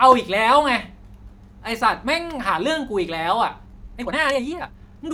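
A time-stretched section runs from 3.64 s to the end of the speech, played back at 2.0 times speed with the pitch held where it was. The likely cause is software squeezing this stretch to fit a shorter slot, dropping short slices of the waveform to save time instead of resampling. At the boundary the pace suddenly doubles, and the remainder sounds rushed, while its pitch stays unchanged.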